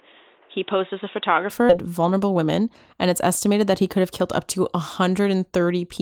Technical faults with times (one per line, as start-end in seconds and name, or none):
0.00-1.50 input switched to a poorer device
1.69-1.71 skip ahead
1.87-2.75 jitter buffer speed-up
3.67-5.34 jitter buffer speed-up